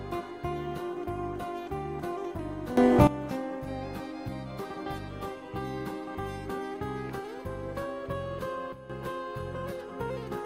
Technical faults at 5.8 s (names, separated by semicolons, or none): none